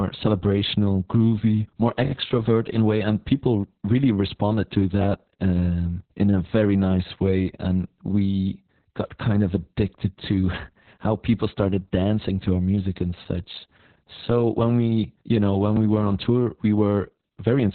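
From the start of the clip to its end, the speech carries heavy Opus voice compression. The sound is cut off sharply at about 4.3 kHz, so the band has been narrowed to narrowband. The linear-prediction coder is rebuilding each frame from a coarsely coded excitation, which points to a bitrate near 6 kbps with long frames. The result is muffled and hoarse, with a slightly robotic texture.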